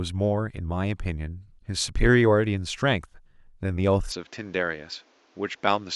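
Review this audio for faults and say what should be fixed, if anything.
From 4.12 s the input likely switched to a poorer device: the spectrogram abruptly loses everything above 7.6 kHz, and the waveform steps down about 5 dB without a gap. Lock recording to a single input device so the system cannot change microphones mid-take.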